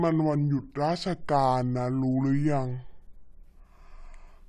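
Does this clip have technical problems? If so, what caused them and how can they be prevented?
Yes. The clip has a wrong sample rate throughout: samples were played back slower than they were captured, with no conversion. Speech runs at two-thirds speed and sits about 7 semitones low, which fits 48 kHz audio played at 32 kHz. To prevent this, check that the playback rate matches the file's rate, or resample before output.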